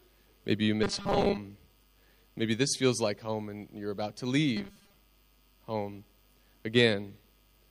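From 0.83 to 1.37 s and again from 4.57 to 4.95 s the sound turns into a rigid, metallic 200 Hz buzz, robotic sound from repeated short buffers. It likely comes from a 5 ms slice being replayed while new audio ran late, about half the first stretch and most of the second.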